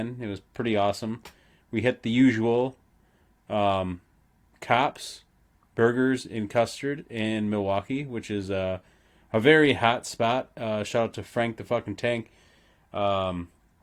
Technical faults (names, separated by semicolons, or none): none